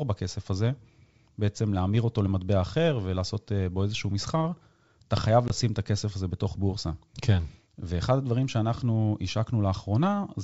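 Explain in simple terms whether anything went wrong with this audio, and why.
One thing went wrong: packet loss on an ADPCM call. At 5.48 s a couple of packets went missing, leaving a sharp 20 ms hole of silence. The decoder loses track of the sender, so the speech comes back with slight distortion before settling.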